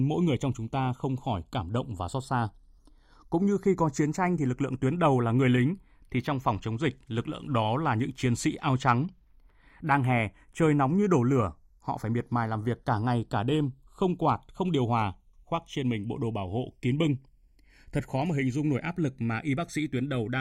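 From start to finish, the channels drift apart. They behave like two devices on separate clocks, differing by about 40 parts per million. The delay between left and right keeps sliding. By the end it reaches about half a millisecond. Summed to mono, the two channels cancel at shifting frequencies. Comb-filter notches creep slowly through the spectrum. The speech takes on a gradual, hollow, swirling colour, heard as slow flanging.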